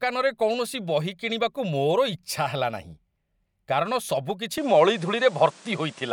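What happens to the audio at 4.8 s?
At 4.8 s the speech is already in a changed state that begins at 4.58 s and lasts to the end. From that point nothing comes through above 10.5 kHz, the level shifts by around 5 dB, and a new noise floor appears some 30 dB under the speech, with no gap at the transition. This is likely an input switched to a poorer device: the system moved to a different microphone or a headset's call profile whose narrower band and own noise now colour the speech.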